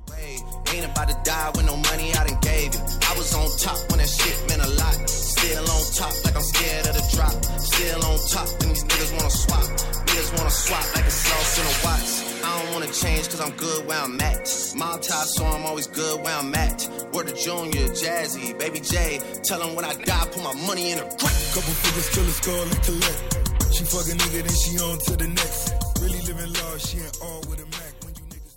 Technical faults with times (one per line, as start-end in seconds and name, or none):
none